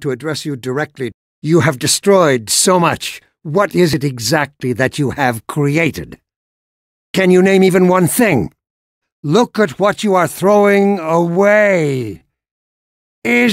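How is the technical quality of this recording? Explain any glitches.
The one real problem is a time-stretched section at the very end, from 10.53 s to the close. There the pace suddenly drops to about 0.56 times normal speed while the pitch stays put. That's likely software stretching the tail to fill a set length, padding it out by repeating short slices of audio. You hear it as a drag.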